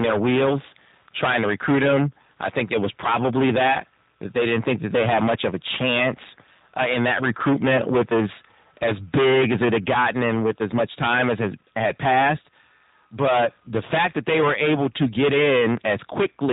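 A harsh, buzzy fuzz rides on every loud syllable from the first second to the last, with the peaks sounding crushed rather than rounded. This is hard clipping: the level was driven about 23 dB past what the signal path could pass, so the waveform tops were sheared flat, and something like a fifth of the samples sit against that ceiling. Those flattened peaks spray harmonics high up the spectrum, which is the grating edge heard on loud passages.

Running under that for the whole clip is a thin, slightly robotic quality with a rough texture, and a top end that stops dead at about 3.8 kHz, so sibilants lose their hiss. This is the G.729 codec, here in its A variant at 8 kbit/s. It models speech as a vocal tract filter plus a pitch predictor and a handful of pulses per frame instead of carrying the waveform itself. At this low rate the resynthesis damage is plainly audible as that synthetic, grainy sound.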